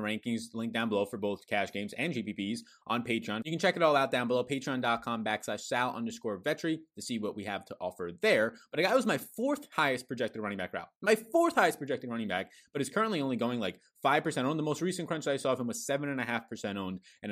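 No technical faults can be heard anywhere in the speech. Nothing in the audio calls for a timestamp or comment.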